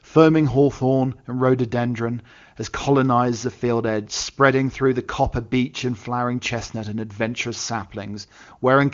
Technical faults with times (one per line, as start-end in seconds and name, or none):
none